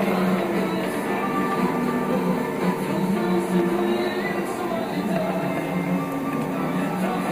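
From 0.48 to 6.73 s, a regular click recurs every 1.04 s, about seven times: likely clock drift buffer slips, where mismatched clocks, roughly 150 ppm apart, force a few samples to be dropped or repeated.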